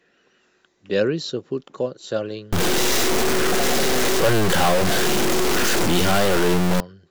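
From 2.53 to 6.80 s, a stuck bit, likely from a faulty converter, adds harsh buzz and noisy pauses; waveform jumps near -15 dBFS, with broadband spectrogram haze.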